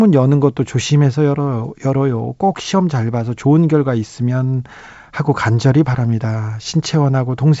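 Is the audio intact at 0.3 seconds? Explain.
Yes, at 0.3 s the speech is intact, with nothing audible beyond the band limit of the 64 kbit/s G.722 wideband telephone coding, which leaves nothing above about 7.7 kHz.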